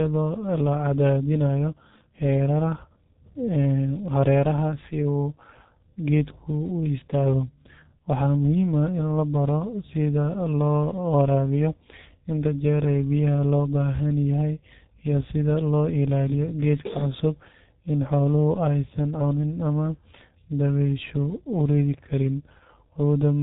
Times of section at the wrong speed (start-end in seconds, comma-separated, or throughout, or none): none